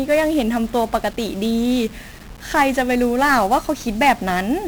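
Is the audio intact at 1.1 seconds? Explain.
No. At 1.1 seconds the speech carries heavy 1-bit DFPWM compression, which runs through the whole clip. Each sample keeps only one bit steering an adaptive level up or down, so dense broadband quantisation noise makes the speech fuzzy and crackly and buries its treble in hiss, consistent with a stream of roughly 48 kbps.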